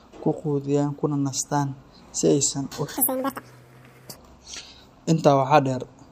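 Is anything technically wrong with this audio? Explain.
Yes. From 2.97 to 4.16 s the speech is audio read two samples at a time: each pair is taken as one frame, so it plays at double speed and an octave higher. A pitch shifter would keep the original pace.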